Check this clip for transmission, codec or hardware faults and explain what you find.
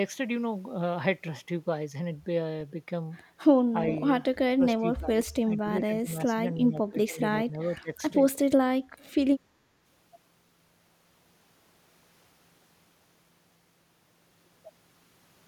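The speech repeatedly dips and breaks up between 4.48 and 7.9 s, in four bursts. The likely cause is speech suppressed in double talk.

From 4.48 to 4.63 s the speech briefly sinks by about 25 dB. From 4.79 to 6.46 s it fades in and out, with gaps totalling around a second at up to about 15 dB down. From 6.68 to 7.21 s and from 7.45 to 7.9 s it drops by about 20 dB in choppy pieces.

While the far end was also talking, the echo canceller apparently could not tell this talker from the loudspeaker echo, so it attenuated both.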